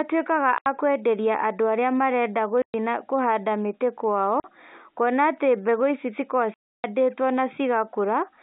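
Packet loss filled with silence cuts this telephone-band speech four times: 0.58–0.66 s, 2.62–2.74 s just before "na kũhanda mĩtĩ", 4.40–4.44 s between "na kũhanda mĩtĩ" and "kuona atĩ", and 6.54–6.84 s. The holes last 80, 120, 40 and 300 ms, all multiples of 20 ms, which fits 20 ms packets. The receiver filled each missing stretch with digital silence, so the speech stops abruptly and restarts at a hard edge each time.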